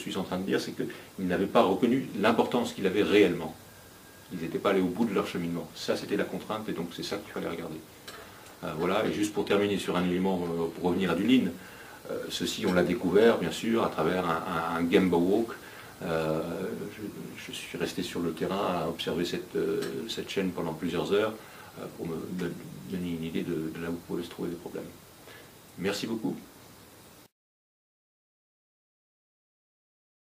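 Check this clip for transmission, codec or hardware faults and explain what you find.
One fault turns up: an adaptive stream at a lower bitrate, from 9.06 to 11.06 s. The delivery connection evidently slowed, so the player swapped to a far leaner encoding for those two seconds. The sound points to a step down from 96 kbit/s AAC-LC to 20 kbit/s HE-AAC. Playback continues without a gap, but quality drops abruptly: coding artefacts thicken and nothing remains above 14.9 kHz. At 11.06 s the higher-bitrate version returns just as suddenly.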